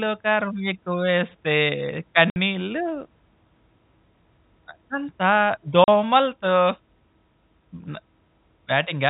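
Packets were dropped in transit and the receiver played silence in their place: a 60 ms hole at 2.30 s and a 40 ms hole at 5.84 s. The gaps, consistent with 20 ms packets, chop the speech with abrupt edges over the band-limited G.711 telephone sound.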